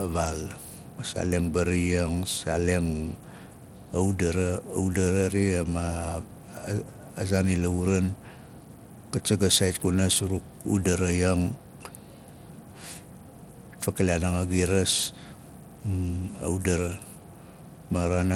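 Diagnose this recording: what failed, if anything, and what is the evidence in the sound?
Codec stage: likely Bluetooth SBC compression, its small bit pool fitting about 96 kbps, leaving gritty quantisation across the speech and nothing above 17 kHz.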